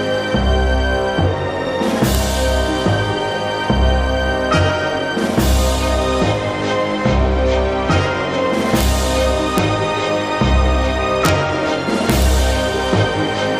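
Integer overflow cracks appear at 2.15 s, 8.81 to 8.83 s, 9.58 s, 11.25 to 11.29 s, and 12.10 to 12.22 s. Peaks push only about 1 dB or less past the integer limit, yet instead of being held there they wrap to the opposite extreme. Each event is a violent, sharp crack. On the waveform, peaks jump abruptly from positive to negative. A spectrogram shows bright vertical broadband streaks.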